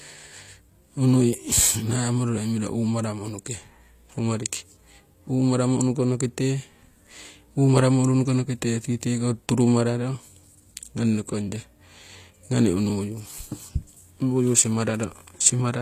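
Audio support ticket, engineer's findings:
Throughout: s sounds gritty, metallic, lispy; treble synthetic, plainly audible, nothing above 14.9 kHz. Likely HE-AAC compression at a low bitrate, around 24 kbps. Upper band rebuilt by copying lower bands upward, so harmonics misalign above the crossover.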